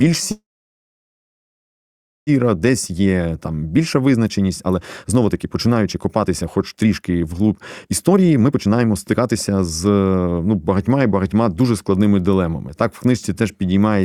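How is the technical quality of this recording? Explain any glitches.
The recording has two clear faults, both in the first twelve seconds of this speech clip.

From 0.31 to 2.30 s there is a call audio freeze. The last sound carries on briefly as a fading buzz, then nearly 1.9 s of silence, and the speech resumes where it stopped, with nothing lost. Delayed packets likely drained the jitter buffer. On a waveform this shows as a short decaying tail and then a flat line. A spectrogram shows a smeared, fading band and then emptiness.

From 2.55 to 11.97 s comes a jitter buffer speed-up. Speech runs at about 121% speed but keeps its normal pitch, so it sounds hurried. The receiver cut many pitch-period slivers, roughly two seconds in total, to catch up after the freeze. A spectrogram shows harmonic spacing unchanged but syllables compressed closer together.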